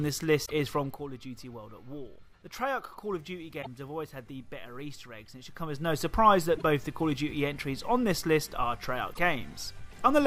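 Damaged data in a compressed stream causes short chirps or blips at 0.42 to 0.51 s, 3.61 to 3.67 s, 6.54 to 6.63 s and 9.11 to 9.18 s, where corrupted frames make the decoder lose sync and skip ahead to the next frame. Zipper noise runs from 5.50 to 6.14 s: a level change of around 10 dB is applied in unsmoothed 1 dB steps, roughly thirty a second, so each jump adds a tiny click and together they form an audible ticking over the audio.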